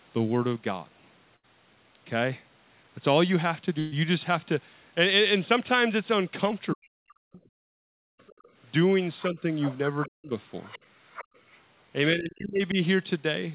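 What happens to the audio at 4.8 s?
Nothing goes wrong at 4.8 s: the speech there carries on intact, with no dropout, glitch or other fault at that moment.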